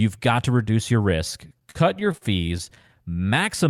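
A speech recording with repeated stalls (stutter) from 1.47 to 2.90 s, just after "to reduce your risk". Packets reached the receiver late or slower than playback, so the jitter buffer kept running dry. There are 17 brief hitches in that stretch, the longest about 43 ms. At each one, the last sound is extended to bridge the wait. Together they add 247 ms, about 17% of the span. Nothing is lost, but the delivery drags and stutters.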